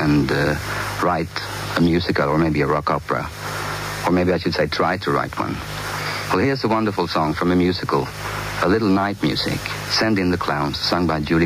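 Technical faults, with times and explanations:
Throughout, gain pumping: the gain is pulled down each time a loud sound arrives, a level swing of around 15 dB, so loud and soft passages sit unnaturally close together and the whole clip sounds squashed and breathing. The likely cause is input gain set far too high with a fast limiter clamping each peak. On a waveform the envelope looks flattened against a ceiling.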